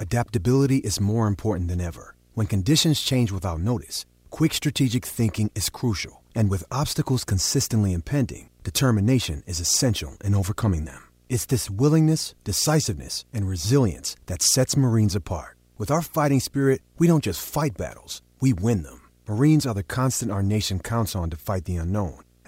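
A screen or video cable is coupling into the audio path, producing video or display buzz for the whole clip: a steady 60 Hz buzz at the picture's field rate, with gritty hash above it, sitting roughly 35 dB below the speech.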